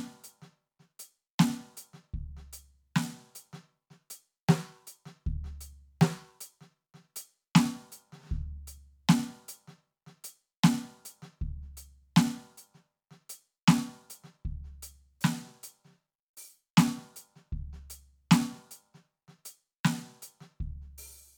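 No technical faults can be heard anywhere in this music.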